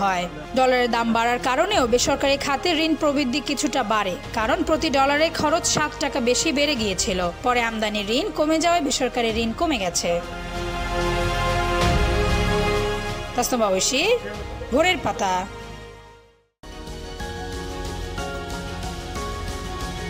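Sample clock jitter runs through the whole clip, from start to finish. The converter's sampling clock wanders by something on the order of a couple of microseconds, so each sample lands slightly early or late. Where the waveform changes fastest, that timing error becomes an amplitude error, leaving a grainy hiss roughly 30 dB below the signal. It thickens on loud, bright passages and drops away whenever the audio falls silent.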